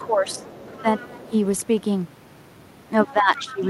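A short speech clip with two echo-related faults. Other side's voice leaking through appears faintly, roughly 25 to 30 dB below the talker, at 0.01–0.06 s, 0.29–1.31 s and 3.09–3.13 s, likely residual loudspeaker echo the canceller missed. Speech suppressed in double talk shows as the talker dipping by roughly 10 to 15 dB at 0.04–0.44 s, 0.82–0.86 s and 3.06–3.61 s, likely the canceller attenuating everything while both sides spoke.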